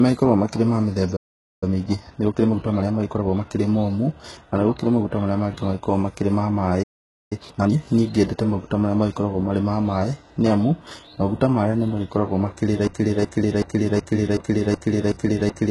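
HE-AAC compression runs through the whole speech clip. Heavy damage points to a very low bitrate, around 12 kbps. The treble is likely rebuilt from copied lower bands, so s sounds come out gritty, lispy and metallic.

Playback stall at 1.16 to 1.63 s: the sound drops to silence mid-flow for about 0.46 s, likely because the player ran dry of data or its thread was blocked.

Time-compressed catch-up follows from 1.63 to 3.45 s, running at 1.25 times normal speed. To clear the backlog, the player trims small slices and cross-fades the joins. The speech sounds hurried at unchanged pitch.

Playback stall at 6.83 to 7.33 s: another gap of about 0.48 s cuts the sound off abruptly, with the same probable starvation or blocked output behind it.

Time-compressed catch-up from 7.33 to 7.79 s is harsher, at 2 times speed. A much larger share of the material is cut and spliced in this short span, so the speech rushes noticeably at its normal pitch.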